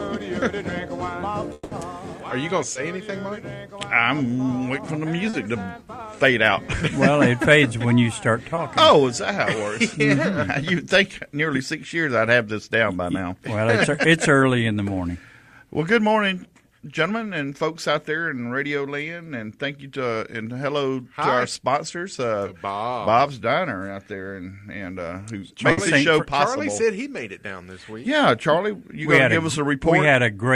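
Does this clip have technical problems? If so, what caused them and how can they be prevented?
Yes. From 1.53 to 1.73 s, about 180 ms of audio is replaced by a fading continuation of the preceding sound, with no silent gap before the audio resumes further on. The cause is likely a long network dropout, in which nothing arrived and the receiver extrapolated. A jitter buffer with more headroom and a more stable network path would prevent it.

At 2.73 to 2.77 s, 5.29 to 5.35 s and 8.55 to 8.59 s, there are brief smears of about 20, 40 and 20 ms. These are short concealed packet losses, where the decoder bridged the missing audio by extending the last sound and blending back. Forward error correction or redundant packets would prevent them.

From 25.71 to 25.79 s, a burst of packet loss leaves a held, fading continuation lasting about 60 ms. Consecutive packets were lost or arrived too late, and the sound picks up past the missing section. 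Interleaving with FEC and a better link would prevent it.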